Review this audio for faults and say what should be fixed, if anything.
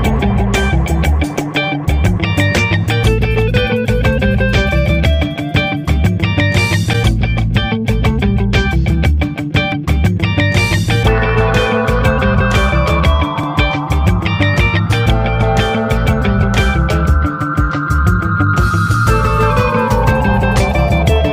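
At 9.72 s there is a single tiny click, a hard discontinuity too short to register as a stutter. This is a repeated buffer: fresh audio failed to reach the output in time, so the device replayed its last block once more, about 1.33 ms long, which fits a 64-sample buffer. The doubled block joins abruptly at each edge, and about a millisecond and a half of real audio is lost. Raise the output buffer size or give the audio thread higher scheduling priority so blocks are always delivered before the device runs dry.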